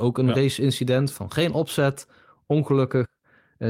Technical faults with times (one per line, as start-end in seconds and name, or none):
none